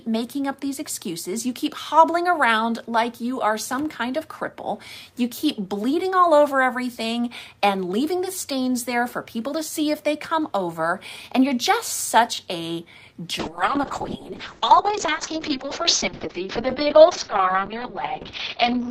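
At 13.41 s a call bitrate drop sets in and lasts to the end at 18.91 s. The encoder's budget collapses, with the sound pointing to a fall from roughly 48 kbps to about 6 kbps. Coarse coding turns the audio rough and watery, and the bandwidth narrows from 20 kHz to 6 kHz, leaving it muffled.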